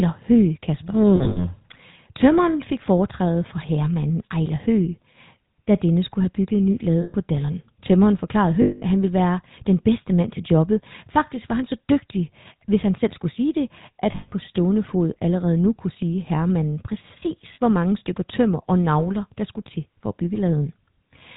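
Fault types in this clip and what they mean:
GSM full-rate codec: speech is cut off above 4 kHz and carries a constant buzzy, gravelly roughness from pulse-driven excitation, unlike the cleaner dullness of simple band-limiting.
lost GSM frames: five short dropouts, from 40 ms to 200 ms, where sound freezes into a metallic ring rather than falling to plain silence or clicking.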